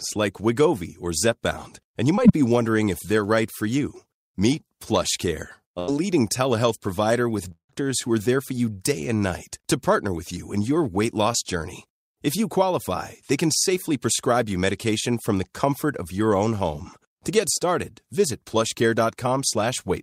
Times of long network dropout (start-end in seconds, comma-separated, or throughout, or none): 7.52-7.71